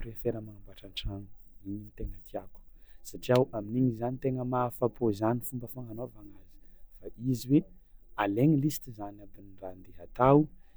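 Speech recording with no audible technical faults anywhere in the clip.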